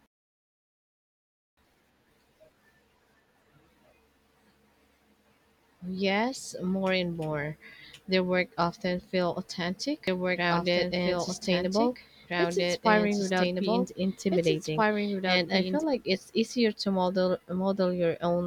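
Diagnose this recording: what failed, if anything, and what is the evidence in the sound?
From 10.08 to 15.84 s a dry, equally loud copy trails about two seconds behind, a doubled audio track, likely from a duplicate capture path.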